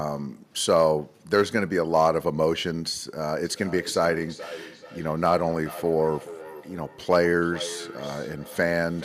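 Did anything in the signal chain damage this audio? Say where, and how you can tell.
Yes. Call processing: feedback echo between two devices starts at 3.44 s and runs to the end. Speech returns roughly every 0.4 s, peaking about 16 dB below the direct signal. One device replays the other's microphone feed, that microphone recaptures it, and neither echo canceller removes it.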